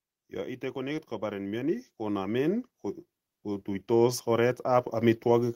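From 0.42 s to 2.75 s the whole recording swells steadily louder, speech and background rising together by about 9 dB, and a second, gentler swell of about 3 dB follows between 3.3 s and 4.28 s. Both are automatic gain rising: the gain control judged the input too quiet and pushed its level up gradually rather than at once, so the room noise climbs along with the speech instead of the speech alone getting louder.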